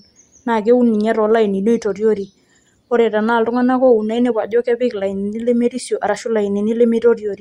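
No technical fault can be heard anywhere in this speech recording, and the signal holds together without any disturbance from beginning to end.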